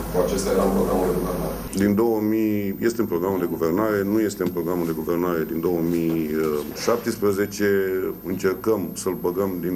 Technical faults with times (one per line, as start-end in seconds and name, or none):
0.00-9.75 switching supply whistle